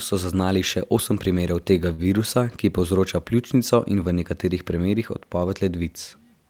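A speech recording with one short stall from a late packet at 1.93 to 2.04 s: a sound is held too long, with a slight buzz or dip. A packet arrived late, the jitter buffer ran dry, and the receiver stretched about 50 ms of sound before resuming, losing nothing.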